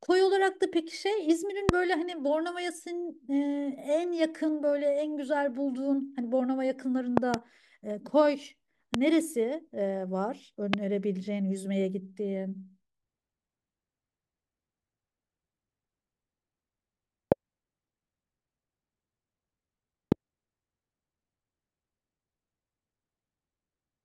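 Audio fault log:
1.69–1.71, 7.17–7.36 (a double pop), 8.94–8.97, 10.74–10.76, 17.32–17.34 and 20.12–20.14 s: loud pop. A sharp thump rises roughly 25 dB above the speech (about 20 dB at 20.12 s) while the speech continues underneath, likely a brief voltage pulse from a switch, plug or static. Each shows as a tall waveform spike and a thin full-height vertical stripe on a spectrogram.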